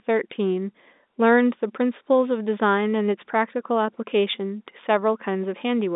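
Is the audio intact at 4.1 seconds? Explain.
Yes, the audio is intact at 4.1 seconds, with the speech carried cleanly through the G.711 telephone coding and no dropout, click or other fault at that moment.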